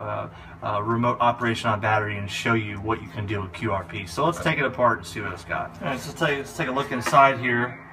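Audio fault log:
Throughout: channel delay (comb filtering). One channel arrives around 10 ms behind the other, and when the two are summed to mono, content common to both cancels at evenly spaced frequencies. The first notch falls somewhere near 40 Hz, with further notches repeating roughly every 100 Hz up the spectrum. These fixed holes thin out the sound and give it a hollow, phasey colour.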